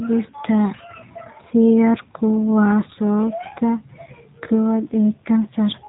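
From start to finish the speech carries plainly audible G.729 codec damage, consistent with 8 kbit/s G.729A. Each 10 ms frame is rebuilt from a vocal tract filter, pitch predictor and sparse pulses, sounding rough and synthetic. A spectrogram shows nothing above 3.8 kHz.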